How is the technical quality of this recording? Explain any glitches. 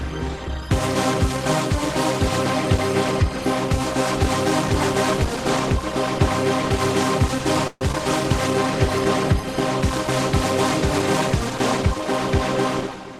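The recording has three glitches, two of them clustered just before the eight-second mark and one near the end.

Call audio freeze, 7.67 to 7.82 s: the sound stops progressing and the last moment is stretched into a fading buzz for about 135 ms, dipping to silence for roughly 20 ms before the real audio resumes exactly where it left off. The likely cause is packets held up in transit, leaving the jitter buffer empty so the receiver had to improvise. Nothing is lost, but everything afterward now runs 135 ms later.

Short concealed packet loss, 7.92 to 7.95 s: this brief smear comes about a tenth of a second after the freeze. Around 50 ms of audio never reached the decoder in time. The receiver patched the hole with about 16 ms of continued sound, extrapolated from what came before, and then blended back into real audio. The rest of the missing stretch was simply skipped, which takes a few tens of milliseconds off the delay built up by the freeze.

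Jitter buffer speed-up, 12.81 to 13.13 s: the audio plays at about 111% speed while the pitch stays unchanged, giving a rushed feel in the closing moments. The receiver's buffer was holding more audio than it aims for. To trim the excess, it repeatedly cut out tiny pitch-period-sized slices, removing roughly 40 ms in total.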